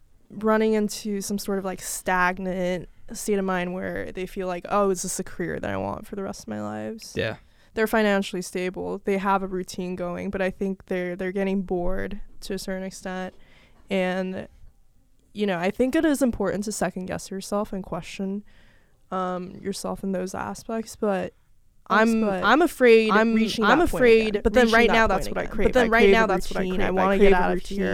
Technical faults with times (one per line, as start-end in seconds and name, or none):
21.91-27.94 doubled audio track